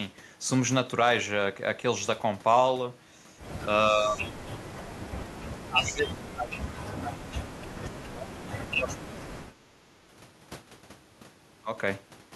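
Speech that sinks by some 30 dB at 3.91–4.63 s, 5.41–7.58 s and 8.01–8.39 s, and by about 35 dB at 8.56–9.5 s, likely speech suppressed in double talk by the echo canceller.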